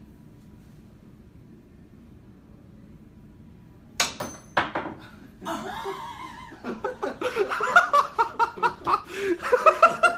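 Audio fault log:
6.51–10.05 s, call bitrate drop: The sound turns coarse and loses clarity from 6.51 s. The top end dulls and a rough, watery texture appears. This fits the encoder being pushed from about 48 kbps down to roughly 16 kbps after the call's bandwidth estimate fell. With so few bits, detail is quantised crudely, and the highest frequencies are dropped to save space. The degraded state holds for about 3.5 s, through 10.05 s.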